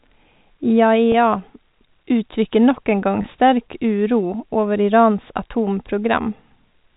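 At 1.12 to 1.14 s and again at 3.22 to 3.24 s, packet loss with pitch repetition occurs. Each time about 20 ms of audio went missing, which fits a single lost packet, and the receiver covered the hole by repeating the last pitch period of the speech. Because each gap is so short, the sound is a brief held, slightly buzzy smear rather than a dropout, heard over the narrowband G.711 telephone coding.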